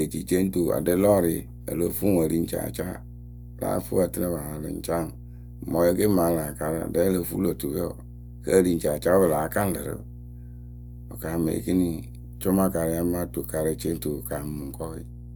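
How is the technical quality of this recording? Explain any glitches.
The recording is marred by one persistent fault that runs the whole length of the speech. Mains hum sits under everything as a steady 60 Hz tone, roughly 15 dB below the speech, loud enough to hear clearly. A ground loop or nearby transformer has leaked the power-line frequency into the signal. Unlike broadband rumble, it holds one fixed pitch and never drifts.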